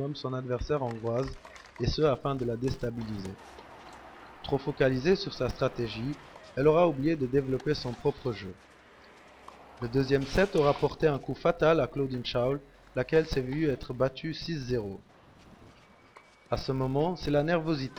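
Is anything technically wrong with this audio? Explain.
Yes. From about 2.06 s to the end, there's a filter restarted on every block: it drops its state and starts each block from silence, leaving a tiny transient each time. That adds up to a 172 Hz buzz, which fits 256-sample blocks, rising and falling with the sound's level.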